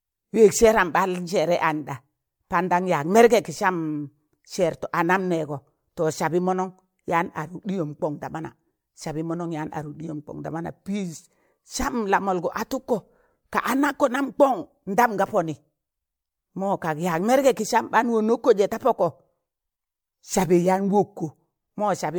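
Across the whole speech clip there's generation loss: it sounds swirly, smeared and hollow, with blurred consonant attacks, likely from being run through MP3 around four times, each pass piling on fresh quantisation noise. It fits roughly 96 kbit/s, with nothing above 20.1 kHz.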